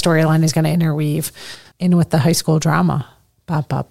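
Speech, in which one channel likely drops out from 1.55 to 1.65 s, after "is going to interweave", abruptly lowering the mono sum by about 6 dB.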